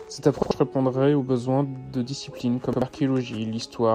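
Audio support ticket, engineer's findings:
Repeated buffer, 0.43–0.51 s, just before "répondrait aux besoins de": an 85 ms stretch of speech sounds twice, with a hard join at the repeat. The output path underran and replayed its last block. The length fits a 4096-sample buffer.

Repeated buffer, 2.73–2.82 s, right after "aux besoins de disciplines": the same 85 ms double play, heard as a stutter rather than a gap. Unlike a dropout, nothing goes silent. The repeat stands in for about a tenth of a second of new audio.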